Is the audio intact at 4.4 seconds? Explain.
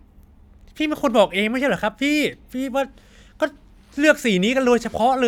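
Yes, at 4.4 seconds the speech plays through cleanly, with no dropout, click, distortion or other fault at that moment.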